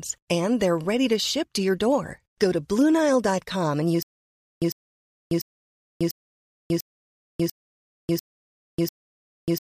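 From 4.03 s on, a stutter with silent gaps: one 0.1 s burst repeats every 0.69 s with silence between, likely a stalled stream retrying.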